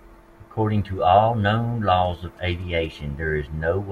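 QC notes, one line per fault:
2.05–3.01 s, GSM signalling bursts: a galloping dit-dit-dit run of short buzzes sits under the speech at roughly 30 dB below it. A nearby 2G phone exchanging signalling with its network transmits brief groups of radio pulses rather than a continuous carrier. The audio circuitry rectifies that RF, so the pulse envelope becomes an audible buzz repeating at about 217 Hz, which is the GSM frame rate, heard as a buzzy, stuttering interference.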